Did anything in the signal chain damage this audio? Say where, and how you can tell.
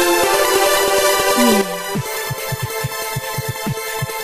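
Yes. A sudden gain jump occurs at 1.61 s: the level drops by about 9 dB between one sample and the next and stays down to the end. The background noise falls by the same amount at that instant, so the change happened after capture, in the digital gain stage. The likely cause is a gain setting applied inside the processing or driver chain without a ramp, so the new scale took effect instantly.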